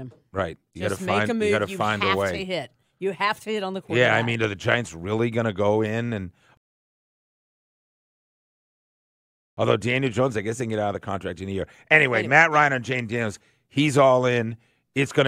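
A rebuffering stall hits at 6.57 s and holds until 9.57 s: the player exhausted its downloaded audio and waited for more to arrive. The speech drops into three seconds of silence, then picks up exactly where it stopped, with nothing skipped, only time added.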